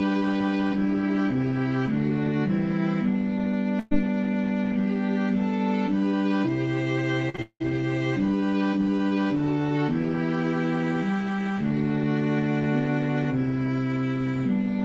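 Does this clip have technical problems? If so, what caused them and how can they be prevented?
Yes. There are three kinds of fault, all from the network side of a call. The top end stops at 8 kHz, which fits an Opus call coded at a modest bitrate.

Burst of packet loss, 3.79 to 3.93 s: about 120 ms of audio never arrived. The receiver extended the last sound for roughly 115 ms, fading it as a held buzz or hiss, with no silence, then resumed later in the stream. It differs from the short losses in its length: it is a sustained tail rather than a brief smear. Better jitter buffering and forward error correction would prevent it.

Short concealed packet loss, at 7.29 to 7.36 s and again at 7.36 to 7.40 s: about 40 ms and then 20 ms went missing back to back. Each hole was patched by continuing the previous sound and blending back in, which gives a quick wobble or smear instead of an audible drawn-out tail. 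At these lengths a brief sound can vanish outright. Enabling Opus in-band FEC and giving the jitter buffer a little more headroom would prevent it.

Long network dropout, 7.42 to 7.62 s: about 180 ms is lost. The filled tail decays into roughly 60 ms of outright silence before the audio returns, and that silent stretch sets it apart from the burst at 3.8 s. It follows straight on from the two small losses, so a likely cause is a brief network stall rather than isolated packet loss. A more stable connection, or a wired link instead of congested Wi-Fi, would prevent it.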